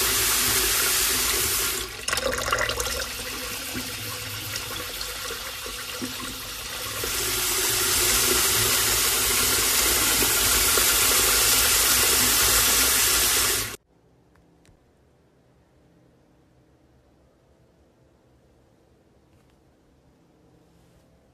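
No technical faults are audible.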